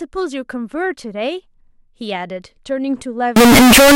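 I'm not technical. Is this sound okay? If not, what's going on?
No. From 3.36 s to the end, the system likely stored the audio as 32-bit float but played it back as 32-bit integer, a float read as integer fault. The speech turns into a very loud, harsh buzz, with background noise as loud as the talking.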